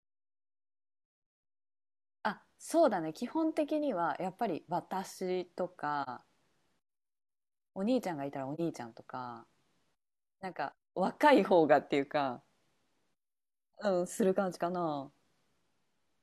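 Soft-edged gaps punch through the speech from 1.00 to 1.43 s, patchy, the longest about a fifth of a second, then at 6.03 and 8.54 s for about 43 ms each. This is AAC frame loss with muting: missing frames decode as silence, with overlapping windows fading the edges.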